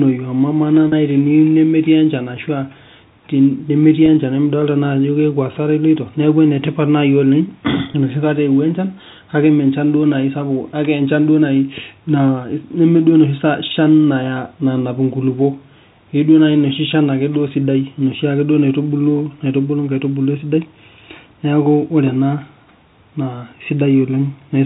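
At 0.88 to 0.92 s, 4.06 to 4.08 s and 7.92 to 7.94 s, just before "enoshi kata eowuo", there is packet loss with pitch repetition. The receiver filled each 40 ms or 20 ms gap by repeating the last pitch period. The lengths point to two 20 ms packets lost at first, then one each time. These gaps are short, so each sounds like a brief held, buzzy tone in the band-limited G.711 telephone audio.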